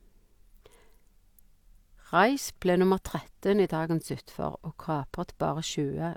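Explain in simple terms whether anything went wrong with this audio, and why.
Nothing went wrong here: no dropouts, glitches or other technical faults turn up anywhere in the recording.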